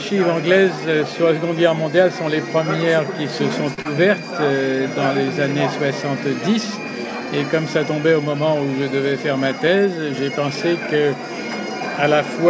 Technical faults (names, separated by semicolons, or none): short stall from a late packet; short concealed packet loss